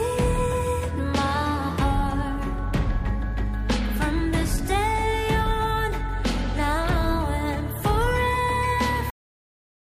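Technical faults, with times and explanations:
9.10 s, cut-off end: the sound stops abruptly mid-event and falls straight into digital silence, with no fade or natural decay, and that silence holds for the last 0.89 s of the clip. The final stretch of audio was never written out or played back, so the waveform simply ends where the last delivered buffer ran out instead of being allowed to finish. The ear hears an interruption rather than an ending.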